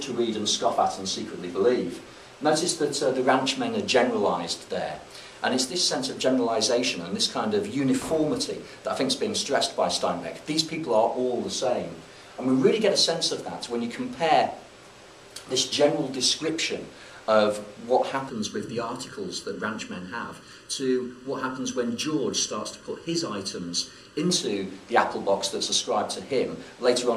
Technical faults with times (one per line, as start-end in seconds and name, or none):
6.18-6.24 corrupt frame decoded
16.41-16.49 corrupt frame decoded
18.30-24.30 channel delay (comb filtering)